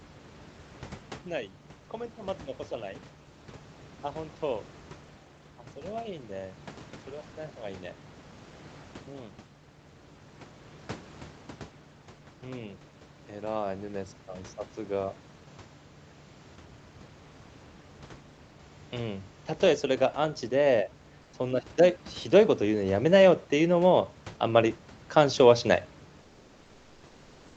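Speech clip with comfort noise in place of the background at 21.23 to 21.31 s (about 80 ms) and from 26.23 s to the end. The room background, already about 32 to 35 dB below the loudest speech, gives way to a smooth, featureless hiss about 3 to 4 dB quieter, likely from Opus discontinuous transmission. Unlike a noise gate or dropout, the gap is never truly silent: synthetic noise fills it.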